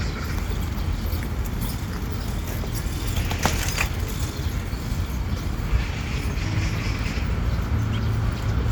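No technical faults are audible.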